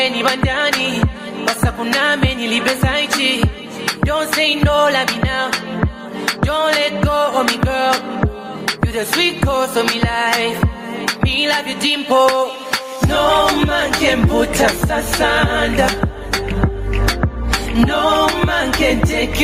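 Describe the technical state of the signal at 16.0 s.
Gain pumping, present throughout including 16.0 s: the gain swings around 15 dB, squashing loud and soft parts closer in level, likely from excess gain hitting a fast limiter. A noise gate would silence the gaps rather than raise them.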